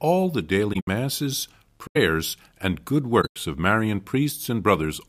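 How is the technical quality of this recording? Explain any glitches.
The speech recording has three spots where damaged audio was concealed rather than reproduced. These are corrupt frame concealed events at 0.73–0.87 s, 1.87–1.97 s, and 3.21–3.36 s, just after "and good". In each case the AAC decoder detected flipped bits in a run of frames and substituted a muted or sign-scrambled copy of the last good spectrum. Each concealed stretch spans roughly 100–150 ms. On a spectrogram it shows as a faded or blurred vertical band, and on the waveform as a brief envelope dip with no spike.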